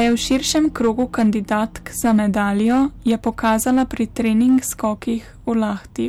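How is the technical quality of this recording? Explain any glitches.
The recording has one fault, present throughout. Hard clipping: the speech drives a stage about 6 dB past its limit, so about 3% of samples are cut flat, adding crackle on loud moments.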